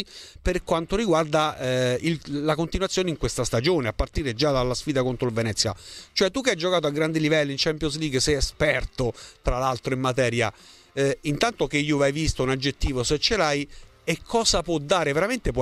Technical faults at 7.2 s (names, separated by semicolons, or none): none